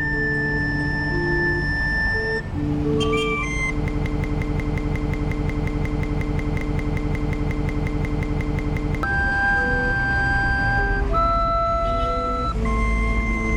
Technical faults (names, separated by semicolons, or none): broken-record loop; damaged data in a compressed stream